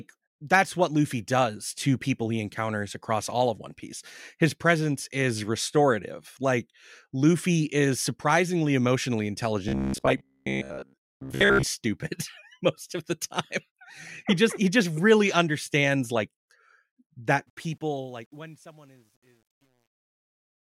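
At 9.69 s, just after "is surprisingly emotionally", the speech turns into robotic sound from repeated short buffers. It lasts until 11.68 s. A rigid buzz near 66.8 Hz sits over the speech. That pitch points to a block of about 15 ms being replayed. The cause is likely audio arriving too slowly, so the playback fills gaps by repeating the last block. Most of the real audio in this stretch is skipped. The speech still follows its rough shape, but sounds metallic.

From 17.47 s to the end at 20.78 s, the closing fade-out shows truncation distortion. The volume stage keeps only 10 bits, with no dither. As the level drops, the waveform collapses into coarse steps. It is worst from 18.15 s to the end. There the quiet tail turns gritty.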